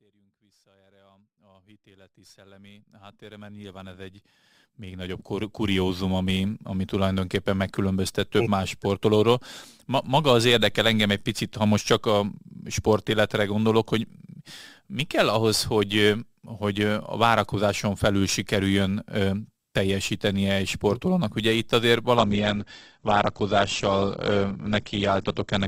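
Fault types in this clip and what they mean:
Adaptive stream at a lower bitrate: from 22.17 s the speech suddenly loses everything above 8.2 kHz and turns grainy, which fits a switch down to a low-bitrate Opus version.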